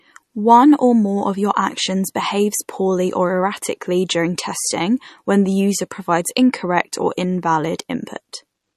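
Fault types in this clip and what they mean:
MP3 compression: The speech has likely passed through an MP3 encoder that was starved of bits. The encoder removed everything above 12.6 kHz and discarded the weaker frequency lines, which drop in and out from one frame to the next. The damage is plainly audible as a watery, swirling texture, with dull, band-limited sibilance and softened consonant attacks. This points to a low bitrate, around 40 kbps.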